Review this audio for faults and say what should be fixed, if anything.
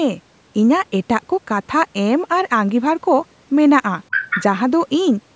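From 4.11 to 4.44 s a second voice intrudes, about 5 dB quieter than the speech. This is likely the other side's voice leaking through an incomplete echo canceller. Using headphones, or tuning the echo canceller to suppress loudspeaker playback more aggressively, would prevent it.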